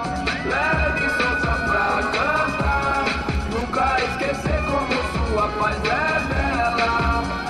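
Between 3.35 and 4.25 s you get CD scratch ticks: eight short clicks, evenly spaced at roughly eight or nine per second, none lasting more than a few milliseconds. That regular spacing is the giveaway. A blemish on the disc wipes out more data than error correction can rebuild, once per revolution, so the player patches over or mutes those samples each time the spot passes, and you hear it as a steady tick.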